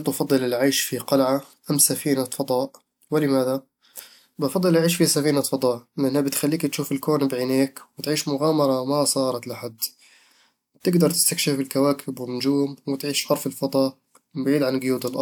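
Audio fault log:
No fault can be heard anywhere in the speech. Nothing in the recording calls for an entry in this log.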